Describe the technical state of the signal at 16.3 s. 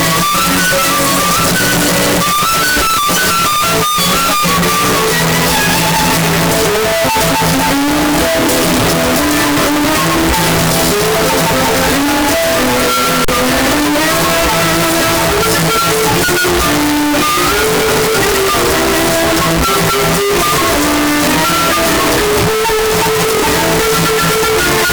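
Signed and unsigned mixed up is present at 16.3 s, as it is across the whole clip. The sound is very loud, harsh distortion in which soft passages come through as loud as strong ones. The likely cause is samples being read with the wrong sign convention, which flips the top bit so that every zero crossing turns into a jump across the full range. The character of the distortion fits 8-bit samples.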